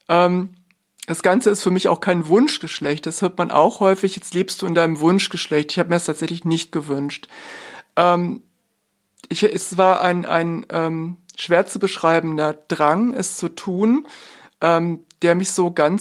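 Lost packets rebuilt from error correction occur at 2.75–2.89 s, 4.17–4.19 s and 13.71–13.77 s in this speech. At each point, packets went missing and the decoder substituted the lower-bitrate copies carried in the following packets, so the sound never drops out. The patched stretches, roughly 80 ms, 20 ms and 40 ms long, which fits four, one and two lost 20 ms packets, sound briefly rougher and noisier than the audio around them.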